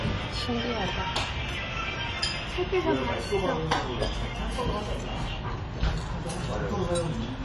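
From start to finish the audio has nothing above 11.5 kHz, with patchy, holed highs and a warbling, fizzy smear on sustained sounds. That points to AAC compression, likely AAC-LC at around 32 kbps. A plain low-pass would be dull but clean, without the swirl.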